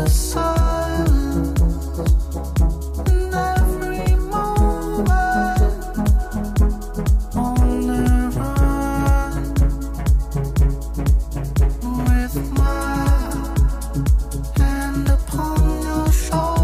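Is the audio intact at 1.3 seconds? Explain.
Yes, at 1.3 seconds the audio is intact, with no dropout, click, distortion or other fault to be heard at that moment.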